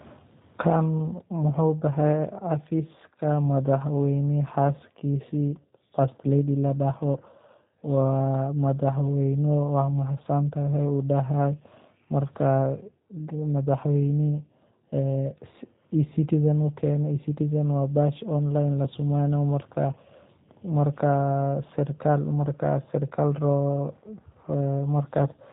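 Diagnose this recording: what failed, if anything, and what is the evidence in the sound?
The codec's the culprit: G.729 compression throughout, with everything above 3.8 kHz gone and a rough, synthetic edge on the speech that fits 8 kbit/s pulse-coded reconstruction.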